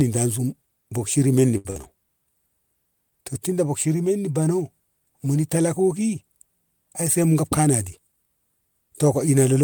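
A short stall from a late packet occurs at 1.57 to 1.68 s. One packet of this speech missed its playout time, so the jitter buffer ran dry and the receiver stretched the last sound by about 71 ms until the packet turned up, then carried on from the same point. Nothing is lost, but a sound is held too long with a faint buzz, and everything after it plays about 71 ms later.

A burst of packet loss follows almost immediately, at 1.70 to 1.78 s. Packets never arrived in time, and the receiver covered the gap by extending the preceding sound for about 50 ms while fading it down. That produces a brief held buzz or hiss. When playback resumes, about 60 ms of the original audio has been skipped, so the speech jumps forward slightly.

A jitter buffer speed-up runs from 7.42 to 8.18 s. By this point the buffer was holding more audio than its target, so the receiver trimmed small pitch-period-length pieces repeatedly to bring the delay back down. 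Around 70 ms is cut in total, and playback runs at about 108% of normal speed while the pitch stays unchanged. The speech sounds hurried through that stretch.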